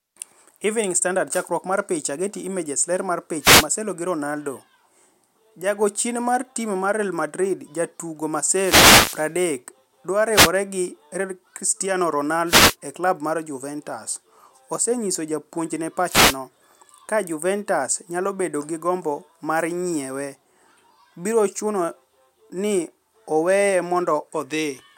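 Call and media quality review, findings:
Short swishes of static over the speech at 3.39–3.68 s, 8.41–9.35 s, 10.31–10.51 s, 12.46–12.76 s, 16.06–16.38 s. Wireless microphone noise hits: analogue FM radio link fading as reflections cancel, receiver noise rising over the voice.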